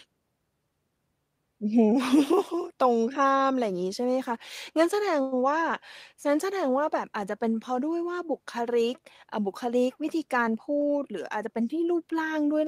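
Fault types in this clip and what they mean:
call audio freeze: 5.21 to 5.34 s, a 106 ms fading buzz or hiss, likely from late packets draining the jitter buffer; the sound then resumes with nothing lost.
jitter buffer speed-up: 10.02 to 11.04 s, the receiver trims around 70 ms of surplus delay in short pitch-period cuts, so speech runs at 107% speed, same pitch.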